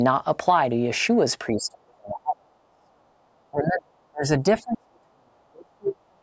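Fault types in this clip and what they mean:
Speech suppressed in double talk: with both sides talking at once, the echo canceller likely mistook the talker for loudspeaker echo and turned everything down. The speech drops by up to roughly 40 dB from 1.53 to 2.92 s, 3.51 to 4.25 s, and 4.43 s to the end.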